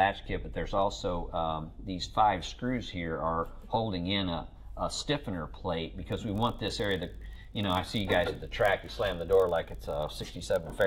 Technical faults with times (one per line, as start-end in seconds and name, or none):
6.10-10.86 block size mismatch (padded)